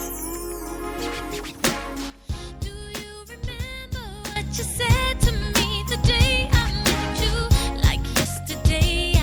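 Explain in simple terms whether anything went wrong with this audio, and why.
At 2.1 s the sound suddenly drops to a much quieter level, and at 4.36 s it jumps straight back up. The change is instant rather than a gradual fade, and the background hiss drops and returns along with everything else. This is a sudden gain jump. The likely cause is a digital volume setting that was switched abruptly, with no smooth ramp, and then switched back about two seconds later.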